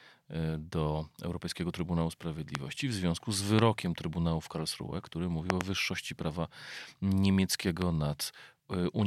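Loud pops at 2.55–2.57 s, 3.59–3.61 s, 5.50–5.63 s (two in quick succession) and 7.82–7.84 s: sharp thumps standing roughly 15 to 25 dB above the speech, which carries on beneath them. They are likely voltage spikes from a plug, switch or static discharge entering the signal chain.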